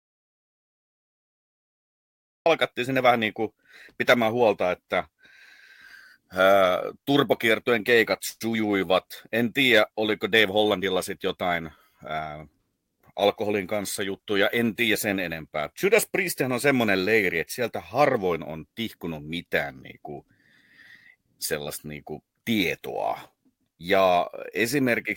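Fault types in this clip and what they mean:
Audio dropout to silence: 0 to 2.46 s, silence without room tone, likely from a lost input, before speech begins at "sinne vähän niin kuin".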